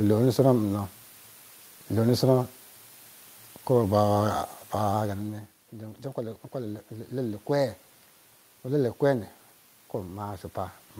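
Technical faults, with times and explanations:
Throughout: low bit depth with dither. The audio is carried at 8 bits, and dither added before rounding turns the quantisation error into a steady, even white hiss, roughly 30 dB below the signal. It stays constant with no grainy distortion on quiet passages.
3.84–4.94 s: drift correction step. The sound slows by about 6% and drops about 106 cents, roughly a semitone, for about a second, then snaps back to normal speed and pitch. This is likely clock-matching software stepping the playback rate to rebalance its buffer.
5.73–7.80 s: automatic gain rising. After the talker moves back from the microphone around 5.0 s, the input falls by about 14 dB. The gain control responds by raising its gain about 4 dB over two seconds, so voice and room noise swell together.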